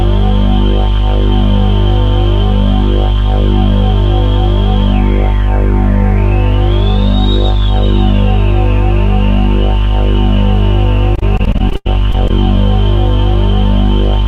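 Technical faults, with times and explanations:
11.15–12.31 s, repeated packet loss (robotic sound): across this stretch the audio breaks up into eleven separate holes, the longest about 89 ms. The receiver covered roughly 239 ms of these holes by stretching the sound that came just before each one, and the remaining 280 ms is simply missing. About a fifth of the span is patched-over sound rather than real signal, so the holes follow one another closely and the passage turns choppy, with pieces audibly dropped out.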